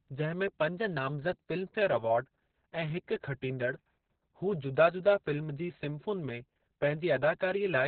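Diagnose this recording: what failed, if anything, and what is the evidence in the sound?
Opus voice compression, throughout the clip, at the codec stage. Nothing is present above about 4.5 kHz, and the speech sounds muffled, hoarse and faintly robotic. This points to SILK narrowband coding at a very low bitrate, around 6 kbps with long frames, where the coarse excitation is heard as heavy damage.

Drift correction step, from 0.79 to 1.82 s, just after "में पंज", at the driver or buffer stage. Speed shifts by 5.4% and pitch by about 91 cents, close to a semitone, for about a second before snapping back. The likely cause is clock-matching software changing the rate in one step to correct its buffer level.

Hard clipping, from 4.81 to 5.12 s, at the converter or a gain stage. The peaks in this span take on crackle. The signal overdrove the stage by about 2 dB, so its tops were cut flat, adding high harmonics.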